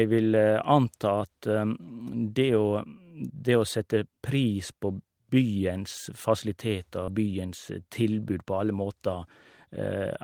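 At 2.77 to 2.79 s, just before "det å sette pris", one packet was lost, and the decoder played the low-bitrate copy carried in the next packet: a lost packet rebuilt from error correction. The 20 ms stretch has no gap but sounds briefly rougher and noisier. The same repair recurs at 7.08 to 7.10 s and at 8.22 to 8.24 s, just before "på alle måter".

Between 7.05 and 7.10 s, a short concealed packet loss occurs. About 20 ms of audio arrived too late, so the receiver extended the preceding sound to fill the hole before blending back, heard as a brief smear or wobble.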